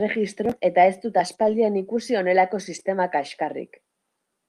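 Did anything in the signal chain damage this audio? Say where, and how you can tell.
Yes, at the network stage. Lost packet rebuilt from error correction: at 1.31 s, 1.39–1.49 s and 2.75–2.81 s the sound turns briefly rougher and noisier with no gap. The decoder played low-bitrate copies carried in following packets. Unlike concealment, the real content survives, only coarsened.

Short concealed packet loss sits between those first two, at 1.35–1.39 s. About 20 ms never arrived, and the decoder extrapolated the preceding sound for roughly 17 ms before blending back. That gives a smeared wobble rather than the grainy coarseness of a rebuilt copy.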